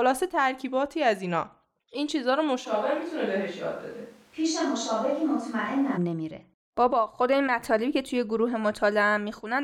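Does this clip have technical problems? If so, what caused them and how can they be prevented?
Yes. From 2.67 s to 5.96 s, the speech turns roomy and hollow, loses bass, and drops by about 5 dB. Background room noise also rises, sitting roughly 30 dB below the speech. The change in and out is abrupt. This is likely a switch to a distant microphone, with the close microphone's signal lost or left out and a farther pickup filling the gap. To prevent it, secure the close microphone's connection and monitor it live throughout the recording.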